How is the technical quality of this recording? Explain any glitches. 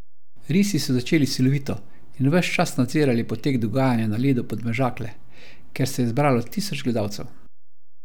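The recording carries one technical fault, present for its whole length. DC offset runs throughout: the entire speech waveform sits shifted off the zero line by a constant of about -30 dBFS. It isn't audible as a sound, but it eats headroom on one side and leaves steady energy at 0 Hz.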